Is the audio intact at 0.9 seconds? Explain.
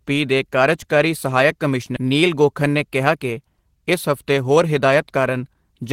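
Yes, at 0.9 seconds the speech plays through intact, with no dropout, click, distortion or other audible fault at that point.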